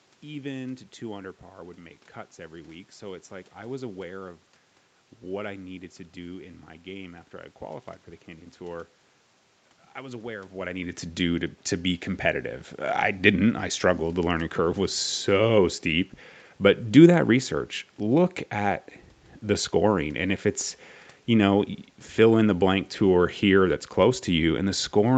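Nothing stood out as a technical fault on listening.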